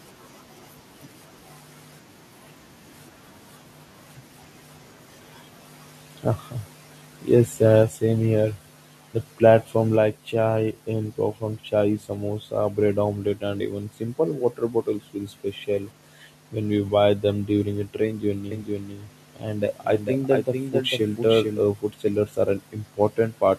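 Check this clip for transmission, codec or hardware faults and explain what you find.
There are two kinds of fault here: a couple of level drops and a stretch of doubled audio.

Microphone volume stepped down at 7.83 s, just before "same here", and again at 9.96 s, just before "chai and from chai". The speech and background each drop by about 3 dB in one instant. That's likely call software turning the mic input down because it judged it too hot.

Doubled audio track from 18.51 s to 21.61 s, starting right after "them during a train". A second, full-band copy of the speech trails about half a second behind, a few dB quieter, with no decay or room colour, and it cuts in and out abruptly. The likely cause is the audio being captured twice, with one path running slower.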